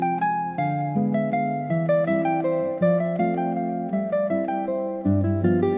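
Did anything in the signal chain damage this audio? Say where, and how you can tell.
No, nothing along the chain from capture to playback has left an audible mark on this audio. No stage stands out as the point where the signal was harmed.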